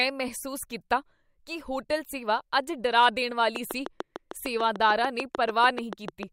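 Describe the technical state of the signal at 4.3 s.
At 4.3 s a train of clicks is running, from 3.56 s to 6.24 s, likely from interference or a faulty connection injecting repeated pulses. About twenty near-identical clicks arrive at a regular 6.7 per second, peaking about 10 dB above the speech and ticking through pauses too.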